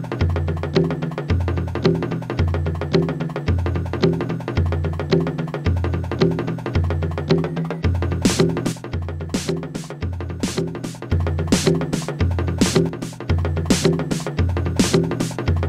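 A recording of sounds with two sudden level drops. The first runs from 8.72 to 11.12 s. The second runs from 12.89 to 13.29 s. Each time, the level falls abruptly by about 6 dB and then snaps back. The likely cause is one channel dropping out. One side of the stereo signal goes silent, and the mono sum loses half of what both sides shared.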